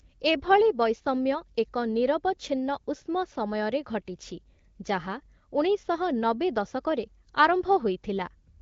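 No technical faults are present in this speech recording; it carries the band-limited character of the AMR wideband (HD Voice) codec, with no content above about 7.5 kHz and the clear, lightly coded quality that fits a rate around 15.85 kbit/s.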